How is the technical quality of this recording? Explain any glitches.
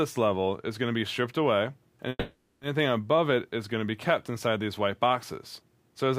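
One glitch. From 2.09 to 2.63 s there is a call audio freeze: the last sound smears into a fading buzz or hiss, ending in about 30 ms of silence. Likely packets stalled and the jitter buffer emptied. Unlike a dropout, nothing is lost; the audio resumes where it stopped, about 520 ms later.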